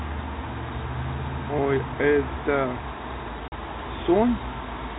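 At 3.48 s the speech drops into a 40 ms hole of packet loss filled with silence, likely two 20 ms packets, with hard edges rather than a smoothed concealment gap, over band-limited telephone audio.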